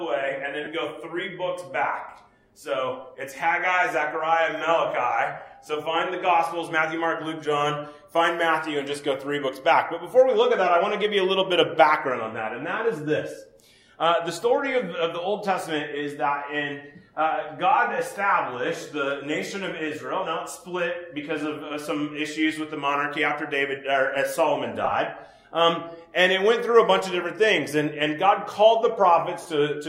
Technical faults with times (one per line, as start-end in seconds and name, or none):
0.64-0.67 lost LE Audio frames
24.84-24.92 lost LE Audio frames
29.42-29.45 lost LE Audio frames